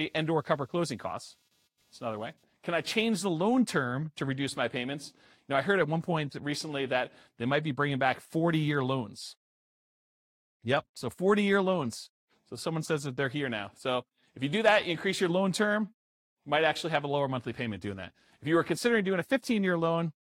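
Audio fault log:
0.00–3.21 s, computer activity noise: A faint buzzy chirping of around 200 Hz sits well under the speech, roughly 45 dB down, and stops just before "the loan term to". Processor or graphics load is shifting the ground shared with the audio circuit, so the interference follows the machine's activity rather than the sound. Unlike steady mains hum at 50 or 60 Hz, it has a pulsed, scratchy texture and disappears when the activity stops.
12.85–12.88 s, corrupt frame decoded: A brief squeaky blip, peaking somewhere around -25 dBFS, lands just before "that they're here now". The timing points to a single damaged compressed frame. Flipped bits led the decoder to misread gains or codes, which placed energy at the wrong frequencies for the length of that frame. A plain digital click is a sharp, broadband tick, and a dropout is a gap of silence. This is instead a short burst that lasts about one frame.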